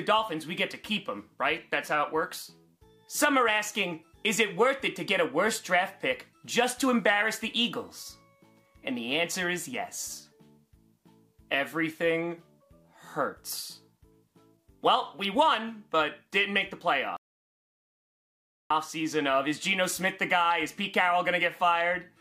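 At 17.17 s the sound cuts off abruptly and the track falls to silence, with no room tone or background hiss underneath, until it resumes mid-flow at 18.70 s. About 1.54 s of material is simply missing. This is an audio dropout to silence: the input signal was most likely lost for that stretch, through a disconnected device, a broken link or an accidental mute, while the recorder kept writing silence.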